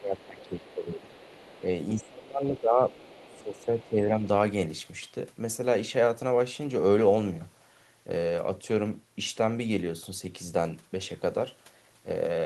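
From 0.0 to 1.16 s the talker is suppressed in double talk, dipping by about 15 dB. The likely cause is an echo canceller unable to separate near speech from loudspeaker echo during simultaneous talking, so it attenuates both. On a waveform the envelope sags. The same suppression recurs from 1.96 to 2.93 s, where the drop is about 20 dB, and from 3.27 to 4.25 s, where it is about 10 dB.

The other side's voice leaks through at 0.2 to 0.25 s (about 30 dB below the speech), at 1.12 to 1.62 s, and at 2.9 to 3.88 s (both about 25 dB below). This is likely residual echo the canceller failed to remove. It sounds faint, and on a spectrogram it appears as weak, separate harmonic traces beneath the main voice.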